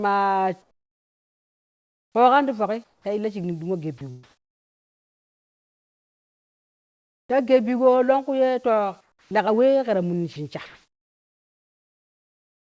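Comfort noise in place of the background runs from 0.62 to 2.15 s, ending just before "koogan ti yoki ta". The real room tone gives way to a smooth, featureless hiss about 14 dB quieter, likely because the sender's voice detector stopped transmitting during the pause and the receiver synthesised noise roughly matched to the background. The same swap happens from 2.84 to 3.05 s, where the fill is about 6 dB quieter, and again from 3.98 to 7.34 s.

Sound dropped by the voice detector occurs at 3.98 to 4.01 s, where about 20 ms of sound vanishes into that steady noise. The likely cause is the detector mistaking quiet sound for background and cutting transmission.

From 9.01 to 9.31 s, after "longku ye to", comfort noise again replaces the background at about 13 dB lower.

An onset clipped by the voice detector falls at 9.25 to 9.31 s. The next sound starts abruptly without its soft beginning, because 60 ms were never sent, likely since the detector was slow to notice sound resuming.

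The voice detector drops sound again at 10.33 to 10.36 s, between "keta munni" and "shin sha". About 30 ms is lost to synthetic noise, likely through the same misjudgement.

The last stretch, from 10.66 to 12.63 s, is comfort noise about 2 dB louder than the real background. Throughout, nothing is heard above 8 kHz, which fits a G.722 call codec at 64 kbps.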